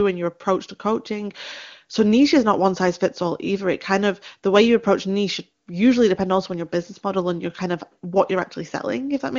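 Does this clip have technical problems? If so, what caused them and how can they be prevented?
No, nothing stood out on listening to this speech clip, which has the roughly 7 kHz bandwidth of AMR wideband (HD Voice) coding at its highest rate.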